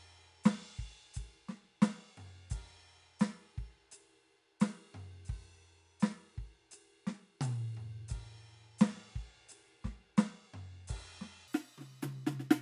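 From 11.48 s to the end at 12.61 s, the music runs at the wrong sample rate. It plays about 1.45 times too fast, raising the pitch by about 6.45 semitones, which fits 22 kHz material replayed at 32 kHz without conversion. Tempo and pitch jump together, giving a bright, chipmunk-like rush. A pitch shifter or time-stretch would change only one of them, and here both shift by the same ratio.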